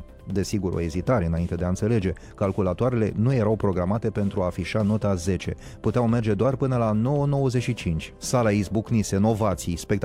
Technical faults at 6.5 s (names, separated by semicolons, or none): none